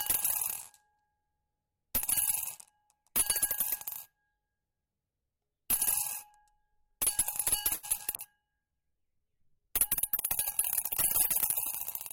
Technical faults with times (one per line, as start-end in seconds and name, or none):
7.73-7.85 short stall from a late packet
7.97-8.01 short concealed packet loss
8.17-12.12 call bitrate drop